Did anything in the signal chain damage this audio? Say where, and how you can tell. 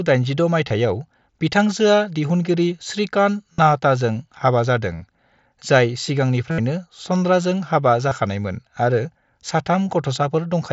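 Yes: concealed Bluetooth headset packet loss on the headset-to-phone radio link, at 0.69, 3.53–3.58, 4.95–5.02, 6.51–6.58 and 8.09–8.11 s. Lost packets were filled by repeating recent waveform, so longer gaps, notably 75 ms at 6.51 s, buzz steadily, then warble as audio returns.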